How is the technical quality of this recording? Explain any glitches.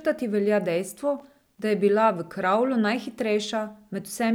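There is one glitch. From 1.18 to 1.59 s, loose connector crackle: a worn contact chops the speech signal, giving irregular scratchy bursts rather than the evenly spaced clicks of digital dropouts.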